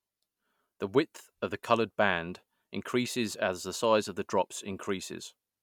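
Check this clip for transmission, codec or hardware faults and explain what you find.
No transmission, codec or hardware fault can be heard anywhere in the speech signal.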